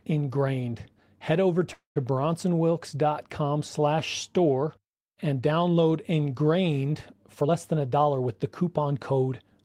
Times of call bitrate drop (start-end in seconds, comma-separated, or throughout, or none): none